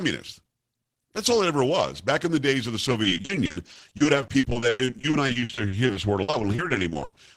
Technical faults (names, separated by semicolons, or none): repeated packet loss (robotic sound)